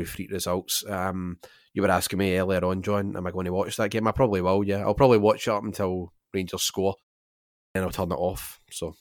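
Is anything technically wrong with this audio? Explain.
Yes, there is a clipped start after a pause. At 7.63 s, after a pause of about 0.68 s, the speech leading into "then I'll" snaps in out of silence with its onset missing, and roughly 0.12 s of sound is simply gone until 7.75 s. The output path went idle during that gap and had not finished waking or relocking when the sound resumed, so the first fraction of the returning speech was dropped rather than delayed.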